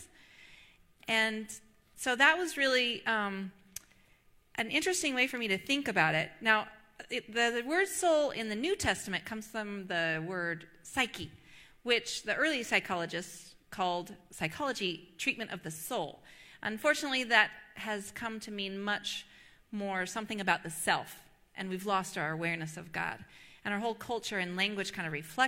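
Listening through the recording, nothing stood out as a technical fault at any point.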